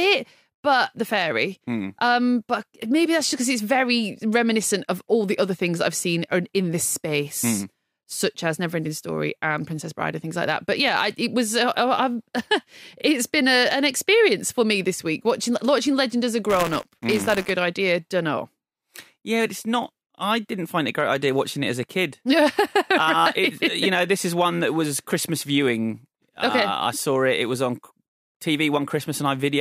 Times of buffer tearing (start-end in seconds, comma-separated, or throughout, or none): 16.49-17.50